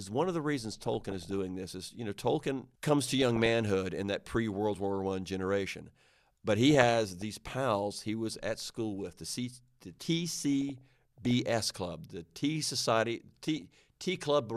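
DAB burbling breaks into the speech five times: 0.81 to 1.39 s, between "one of the reasons" and "this is you know"; 3.04 to 3.50 s, just before "in that pre"; 6.65 to 7.25 s; 10.34 to 11.31 s, before "club the"; and 13.48 to 13.62 s. Weak reception lets around half a percent of bits slip past error correction, corrupting MP2 samples, which put short blips of noise in single sub-bands, and scale factors, which make sub-bands jump in level for up to a frame. A spectrogram shows flickering rectangular blocks, each confined to one narrow band.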